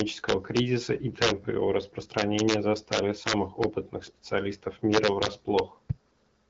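Integer overflow: the loudest peaks of this speech exceed the largest value the sample format can hold, and instead of being limited they wrap around to the opposite extreme. Harsh cracks result, far sharper than clipping, at 0.00 to 0.59 s, 1.22 to 1.30 s, 2.18 to 2.54 s, 2.93 to 3.64 s and 4.94 to 5.59 s, with peaks pushed about 2, 6, 3, 3 and 4 dB past the limit. The cracks are audible through the AMR-WB coding at 12.65 kbit/s.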